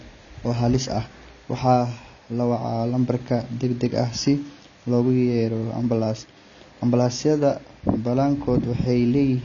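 Throughout the recording, AAC compression at a low bitrate, likely from an AAC-LC encoder, has removed part of the signal. The sound fits a rate of around 24 kbps. With so few bits, the encoder discarded everything above 7 kHz and quantised the remaining bands coarsely. The speech is dull and muffled and has no top-end air. The codec damage is plainly audible from start to finish: sibilants turn fizzy, and sustained sounds take on a smeared, warbling texture.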